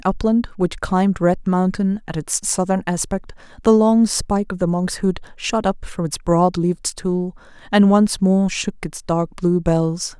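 Nothing goes wrong anywhere in this bit of speech, so there's no technical fault to point to at any moment.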